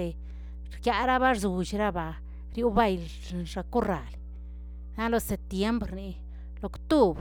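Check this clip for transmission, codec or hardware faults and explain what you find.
There's one fault here, and it runs the whole length of the speech: mains hum. A steady 60 Hz tone sits under everything, fairly prominent at roughly 15 dB below the speech. That points to a ground loop or nearby transformer bleeding the power line into the signal path.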